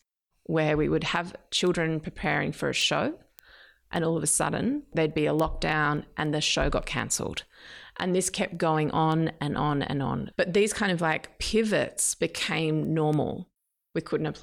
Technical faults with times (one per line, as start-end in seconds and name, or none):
0.24-14.28 word clock ticks